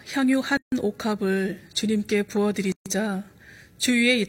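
At 0.57 to 0.72 s and again at 2.72 to 2.86 s, the speech drops out for 149 and 136 ms: a gap at a join of encoded pieces, repeating every 2.0 s, where encoder start delay and end padding stayed in. The waveform shows a flat hole with smeared edges; the spectrogram, a blank vertical band.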